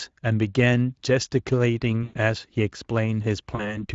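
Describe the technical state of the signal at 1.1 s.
At 1.1 s the speech is intact, with no dropout, click, distortion or other fault at that moment, and the Speex coding there is operating as intended.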